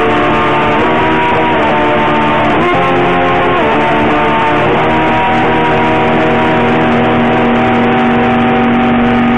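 A recording of sounds with a jump at 1.32 s, where roughly a third of a second vanishes. Compressed frames were skipped, about ten frames of 26.1 ms each.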